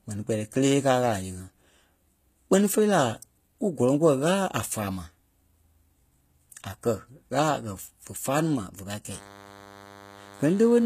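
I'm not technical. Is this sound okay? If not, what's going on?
No. The whole speech recording shows plainly audible damage of the kind left by HE-AAC compression, the likely cause. To save space, this format keeps only the lower sounds and rebuilds the treble by copying them upward, so s sounds come out gritty, metallic or slightly lisping, and nothing remains above about 14.9 kHz.

From 9.11 s to the end, just after "ní ma ve pâi", a DECT cordless phone buzz appears. A nearby cordless phone sends a radio pulse 100 times a second, and the recording equipment picks it up as a quiet, steady, thin buzz under the voice.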